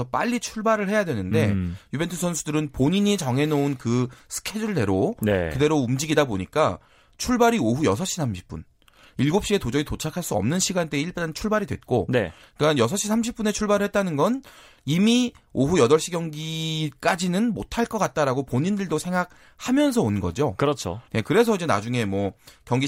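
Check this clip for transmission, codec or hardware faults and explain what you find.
No transmission, codec or hardware fault is audible anywhere in the clip.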